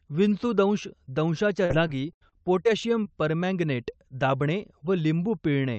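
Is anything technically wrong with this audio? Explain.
Yes. From 1.65 to 2.67 s, right after "विंचूदंश दंशाच्या" and before "परमँगनेट दाबणे", the speech shows repeated packet loss (robotic sound). Around six holes open in quick succession, the longest about 77 ms, and each is patched by stretching the previous sound, so roughly a fifth of that second is concealed. It sounds choppy. On a spectrogram, brief smeared, frozen harmonic blocks interrupt the normal formant movement. The waveform shows repeated, copied-looking cycles. The call path's top limit near 8 kHz is visible above the speech.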